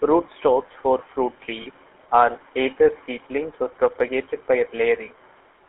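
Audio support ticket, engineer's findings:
GSM full-rate codec, whole clip. Speech band-limited to roughly 300 Hz to 3.4 kHz, with buzzy, gravelly roughness throughout and plainly audible codec damage. Probable component: full-rate GSM encoder, consistent with 13 kbps. Mechanism: vocal tract modelled as a filter driven by regular pulses, excitation decimated to every third sample, so fine detail is lost and nothing above the band survives.

Lost GSM frames, 1.62 to 1.67 s, between "for fruit" and "are either seedlings or". Brief rough, metallic ring in place of the signal, about 40 ms, which fits two dropped 20 ms frames. Probable component: decoder frame concealment. Mechanism: last good frame's parameters repeated to cover the gap.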